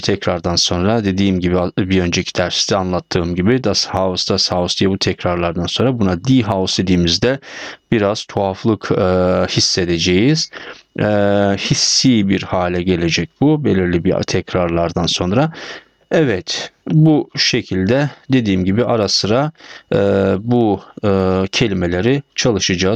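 Throughout the clip there is gain pumping. The gain is pulled down by about 10 dB under each loud sound, which is likely from gain set far too high with a fast limiter pulling it back. On the waveform, peaks look flattened and the noise floor rises and falls with them.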